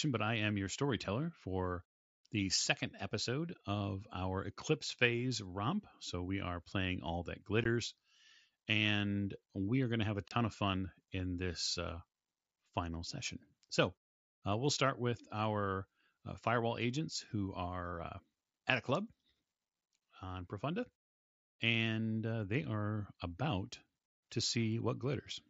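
Abrupt dropouts cut the speech at 7.64 s and from 10.28 to 10.31 s, between "going to have a" and "of fun in this". This is unconcealed Bluetooth headset packet loss: mSBC voice packets vanished and silence or an idle pattern replaced them.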